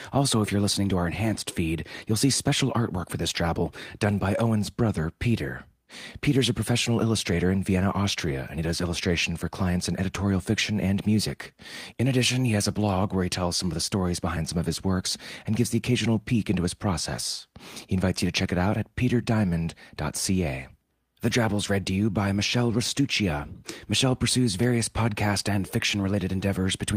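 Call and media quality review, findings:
Lost packet rebuilt from error correction at 9.63 s and 22.69 s: brief rough, noisier 20 ms patch, no gap. Opus decoder playing the low-bitrate in-band FEC copy. On a spectrogram, a thin smeared vertical strip; on the waveform, continuous but grainier.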